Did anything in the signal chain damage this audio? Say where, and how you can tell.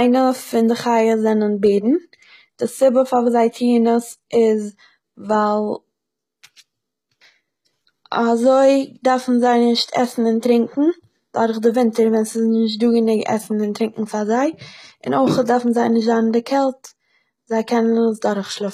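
Yes, at the codec stage. Throughout, nothing sits above 14.9 kHz, and s sounds are gritty and metallic from treble copied up by band replication. This is likely HE-AAC compression at a low bitrate.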